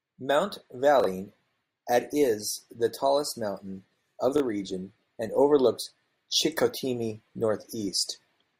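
Chunks out of order occur at 1.00 to 1.06 s and again at 4.36 to 4.40 s, between "the tallest mountain of" and "region and overlooks". In each case a 20 ms block of speech plays after the blocks meant to follow it: two chunks late in the first event, one in the second. Nothing goes missing, but the shuffled sequence creates three hard joins, heard as a brief jumbled stutter.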